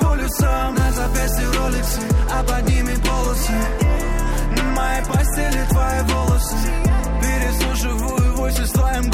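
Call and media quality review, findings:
No audible faults found.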